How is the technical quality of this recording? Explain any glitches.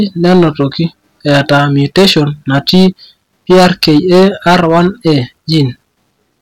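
The technical quality is poor, because the whole recording is clipped. The hard clipping runs throughout, with the speech driven about 12 dB past what the recording stage could pass. Every peak that hit the ceiling got sliced flat, and something like 7 percent of the samples ended up pinned there. Those squared-off tops add harmonics high up the spectrum, so you hear a harsh, gritty fuzz riding on every loud syllable rather than just the odd crackle.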